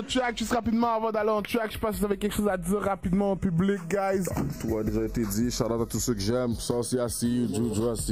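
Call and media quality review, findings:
Channels drifting apart, throughout the clip. Slow flanging-like sweep when summed to mono. Probable cause: left and right captured on separate device clocks, mismatched by around 30 ppm, so the inter-channel delay creeps up to a fraction of a millisecond by the end. Spectrogram of the mono sum: comb notches gliding steadily downward.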